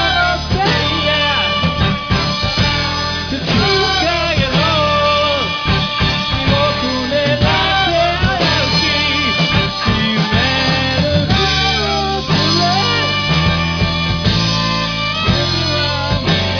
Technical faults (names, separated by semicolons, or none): none